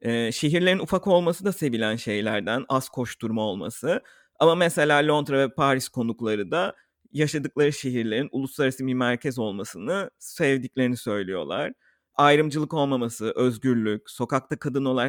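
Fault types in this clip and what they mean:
No technical faults can be heard in this speech recording, and the signal stays steady and intact throughout.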